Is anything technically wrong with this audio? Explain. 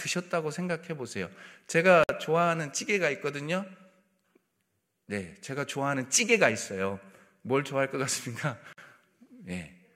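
Yes. The speech contains two gaps at joins of encoded pieces, at 2.04 s and 8.73 s. The audio was encoded in separate pieces and spliced together without removing each encoder's start-up delay and end padding, so that padding survives as dead air. In the clip, continuous speech drops out for about 57 ms and then 50 ms, with smeared edges, before resuming exactly where it broke off.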